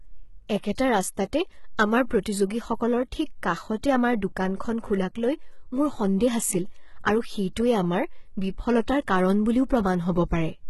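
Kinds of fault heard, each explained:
HE-AAC compression: Throughout this speech, the treble above the core band sounds copied rather than real, making s sounds gritty and lispy. This is likely heavy low-bitrate HE-AAC, roughly 16 kbps. A spectrogram shows blocky, repeated upper bands with a hard ceiling near 11.8 kHz.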